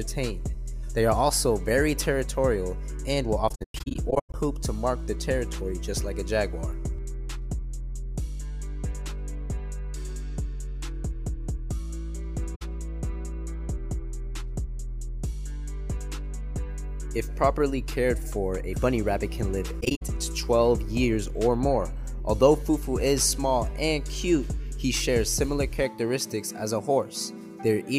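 Around 3.49 to 4.34 s there's AAC frame loss with muting: the decoder got nothing for a scattered set of frames, totalling about 0.47 s of zeroed spectrum, so the sound keeps softly fading out and back, with the longest gap around a tenth of a second. It happens again briefly at 12.55 to 12.62 s (64 ms), then at 19.80 to 20.03 s (128 ms spread in pieces). Overlapping windows round the edges, so these are smooth, soft-edged holes.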